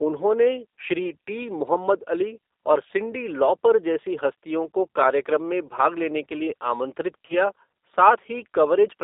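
The whole recording passes through a G.729 codec. The sound is narrowed to about 300 Hz to 3.7 kHz. It has a rough, synthetic edge typical of 8 kbit/s coding.

From 7.26 to 7.35 s, just after "लेने के लिए आमंत्रित", there is VoIP packet loss concealed by the speech codec. About 30 ms are missing, which fits three 10 ms frames. The decoder repeats its last sound, which stretches into a buzzy tone or coloured noise and fades.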